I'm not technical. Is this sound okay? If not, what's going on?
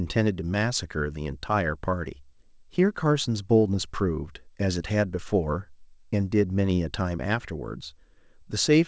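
Yes, no faults found; the speech came over a normal call connection, whose codec keeps nothing above 8 kHz, as expected for that link.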